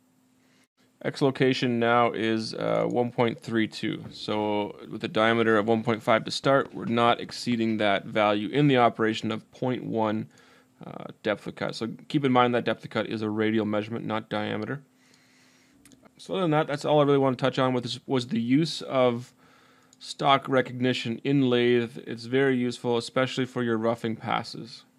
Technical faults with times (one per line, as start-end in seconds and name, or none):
6.44-7.53 train of clicks